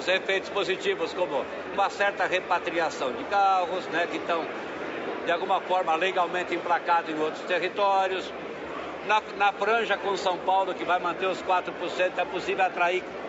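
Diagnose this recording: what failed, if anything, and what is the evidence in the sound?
Listening through the recording, nothing stood out that would point to a failure at any stage of the chain.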